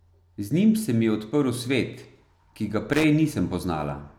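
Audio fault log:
2.93–3.04 s, loose connector crackle: a worn contact in the speech path makes and breaks rapidly for about 110 ms, chopping the signal into an irregular scratchy burst. The waveform shows jagged dropouts and spikes; the spectrogram shows ragged broadband vertical streaks.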